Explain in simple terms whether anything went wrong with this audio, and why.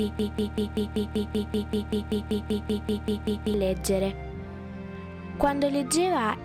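Broken-record loop, start to 3.54 s: a 0.19-second snippet repeats 17 times, likely from a stalled player or stream, so the intended sound there is lost.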